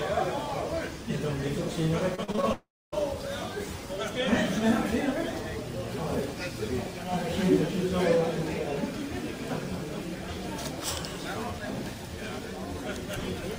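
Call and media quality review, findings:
Repeated packet loss (robotic sound), 2.15–2.45 s. Choppy, robotic stretch. Five short holes, longest 40 ms, about 120 ms missing. Jitter buffer / packet loss concealment repeatedly extends the last sound, covering about 38% of the span. Differs from the dropout: many brief patched gaps in quick succession, audio continuing between them.

Long network dropout, 2.53–2.94 s. Last sound carried on and fading, then about 0.25 s of silence. Audio resumes with about 400 ms lost. Likely a network outage, with receiver concealment holding the last sound before giving up. Differs from the choppy stretch: one sustained gap, not a string of short ones.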